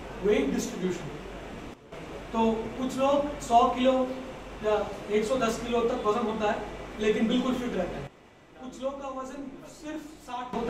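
At 1.74 s the level drops by about 12 dB until 1.92 s, and again from 8.07 s to 10.53 s: a sudden gain jump, likely a digital gain step applied without a ramp. Unlike a compressor or fade, the change is instant and the background noise falls equally.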